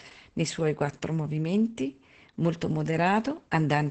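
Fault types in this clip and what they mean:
Opus voice compression: The speech runs through a low-rate voice coder for the whole clip. It models the voice with linear prediction and codes the excitation only coarsely. Nothing is heard above about 8.8 kHz, so the top end is gone. The damage is heavy. The voice sounds muffled, hoarse and slightly robotic. The strain fits a wideband setting near 10 kbps with 20 ms frames.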